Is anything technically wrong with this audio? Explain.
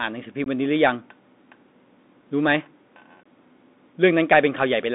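Yes. There are two kinds of fault.

Throughout, the speech runs through a Bluetooth CVSD headset codec. The line band spans only about 200 Hz to 3.6 kHz, which fits a 64 kbit/s CVSD link. The codec sends one up-or-down bit per sample with an adapting step. Steep, bright sounds outrun it, so s sounds turn scratchy over a granular hiss.

There is also unconcealed Bluetooth headset packet loss, at 0.44 to 0.48 s and at 3.24 s. About 19 ms and 23 ms of audio went missing, each a handful of packets. Nothing filled the gaps, so the speech drops out abruptly and can click at the edges.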